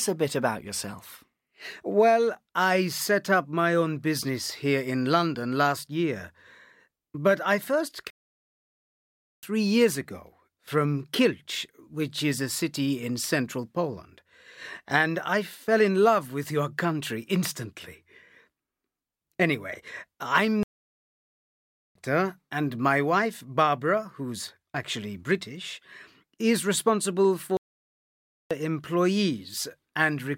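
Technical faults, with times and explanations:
8.10–9.43 s, 20.63–21.95 s, 27.57–28.51 s: playback stall. The sound cuts off mid-flow for about 1.33, 1.32 and 0.94 s, likely because the player starved of data or was blocked. Each shows as a flat gap in the waveform and a blank vertical band on the spectrogram.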